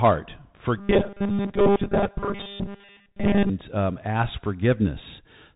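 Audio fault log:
Throughout, Bluetooth CVSD headset codec: the speech sounds narrow and boxed-in, with nothing above about 3.8 kHz, scratchy s sounds, a granular hiss beneath everything, and crunchy distortion where loud high-frequency sounds arrive. CVSD codes each sample as a single up-or-down bit with an adaptive step size, which fits a 64 kbps headset link. When the signal climbs faster than the step can follow it breaks up, and the constant step-hunting leaves the hiss.
0.78 to 3.50 s, robotic sound from repeated short buffers: the speech turns into a rigid, metallic buzz at a fixed 200 Hz, still loosely tracking the syllables, until just before "um ask". The likely cause is fresh audio arriving too rarely, so playback fills the gaps by looping the last 5 ms fragment over and over. Most of the stretch is this repetition, and the loop period forces the steady buzz pitch.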